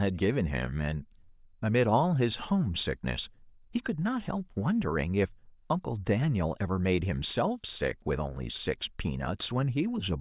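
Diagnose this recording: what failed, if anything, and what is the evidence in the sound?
Nothing failed; no fault is audible anywhere in this recording.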